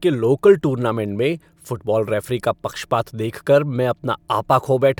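Nothing in this recording stands out as a technical fault; the speech runs without any glitch or interruption worth pointing to.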